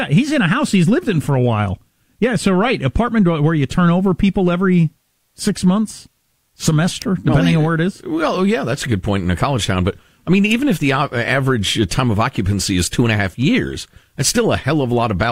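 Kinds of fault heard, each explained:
Electrical switching spike: two sharp, fairly loud snaps on top of the speech, at 7.02 s and 10.51 s, likely from nearby switch arcing.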